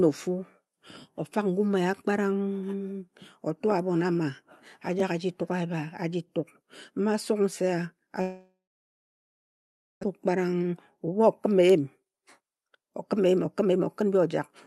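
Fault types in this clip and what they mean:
Long network dropout, 8.21 to 10.05 s: the sound breaks off, its last fragment is drawn out into a short buzz that fades, and then about 1.4 s of near-silence follows before the speech returns. This is likely a stall in packet delivery, with the receiver filling the hole instead of waiting. Roughly a second of audio is never played, so the speech resumes further along than where it stopped.
Jitter buffer speed-up, 11.47 to 14.30 s: too much audio was queued in the receive buffer, so the receiver worked it back toward its target by repeatedly cutting out short slices, each one or a few pitch periods long. Over this stretch the speech runs at about 124% of normal speed, hurried but at the same pitch, with around 0.7 s removed in total, all heard through the call path's 12 kHz Opus bandwidth.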